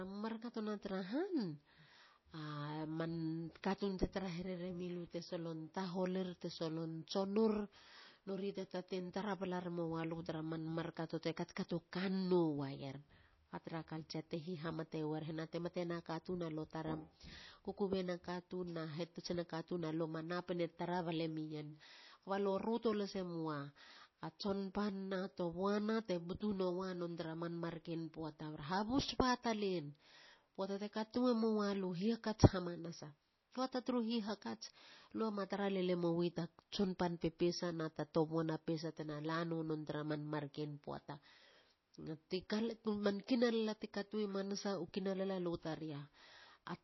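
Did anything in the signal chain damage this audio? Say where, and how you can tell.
Yes, at the codec stage, throughout. The speech sounds watery, with nothing above 5.8 kHz. This is likely MP3 compression at a starved bitrate, roughly 24 kbps.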